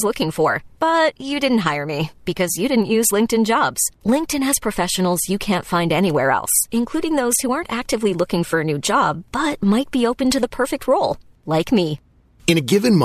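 Nothing in the speech here suggests a technical fault at any point, so there's nothing to flag.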